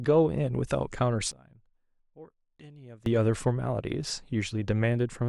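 From 1.32 s to 3.06 s the speech suddenly collapses to a faint remnant, about 23 dB quieter, with the centred voice nearly gone, before returning at full strength. The likely cause is one channel inverted: one side of the stereo pair has flipped polarity, so when the channels are summed to mono the voice they share cancels and only their small difference survives.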